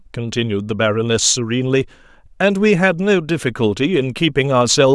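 No technical faults can be heard anywhere in this speech recording. Nothing in the audio calls for a timestamp or a fix.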